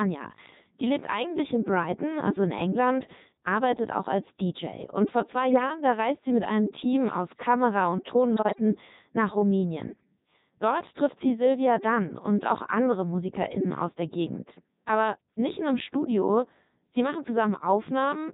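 From start to finish the speech passes through the Codec 2 vocoder, rebuilt from sine waves at a very low rate consistent with its 3.2 kbit/s mode, so it sounds heavily robotic and buzzy. This comes from resynthesis rather than lossy waveform coding, so there is no smeared swirl. Between "vor zwei" and "da reist sie mit", at 5.52 to 5.63 s, and again at 8.35 to 8.60 s, bit errors on digital voice radio, at a few percent, corrupt the frame parameters. Pitch, level and tone jump into warbling bleeps. Unlike dropouts, the sound garbles rather than going silent.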